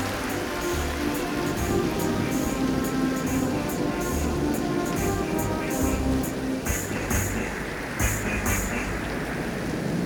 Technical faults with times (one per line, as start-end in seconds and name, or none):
none